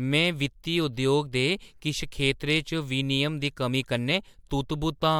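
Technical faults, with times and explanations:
The speech signal stays continuous and stable throughout, with no technical faults to be heard.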